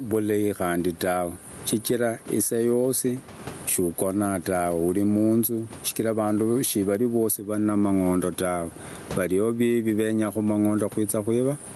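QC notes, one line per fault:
Throughout, gain pumping: with the room noise about 30 dB below the speech, the gain is pulled down on every loud sound, a swing of around 20 dB, likely from mic gain set far too high driving a fast limiter. The waveform shows flattened, near-uniform peaks, and the spectrogram's noise floor brightens between phrases and darkens under each one.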